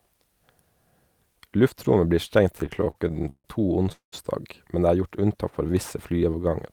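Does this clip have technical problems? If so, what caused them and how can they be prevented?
Yes, there are three kinds of fault here.

From 2.57 to 3.46 s there's a repeated stalls (stutter) problem: thirteen little hold-ups, the longest about 148 ms, fill roughly a third of that stretch. Packets kept showing up late, so the jitter buffer kept draining and the receiver stretched out the last sound each time, which drags the speech without losing anything. A deeper adaptive jitter buffer and a steadier network path with less congestion would keep this from happening.

At 3.92 s the audio freezes for about 0.2 s, up to 4.14 s. The held sound dies away into silence for the last 130 ms, then the speech picks up where it left off. This is likely a call audio freeze, with packets held up in transit until the buffer ran dry. Prioritising voice traffic with QoS and avoiding Wi-Fi congestion or network handovers mid-call would help prevent it.

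Twice near the end the speech slows down while its pitch stays the same. From 5.09 to 5.73 s it runs at 92% speed with about 63 ms added, and from 6.13 s to the end it runs at 89% with about 78 ms added. That's a jitter buffer slow-down: the receiver repeated pitch periods to rebuild its reserve, which leaves sounds slightly drawn out. Starting with a larger buffer target, so it doesn't need to catch up later, would avoid this.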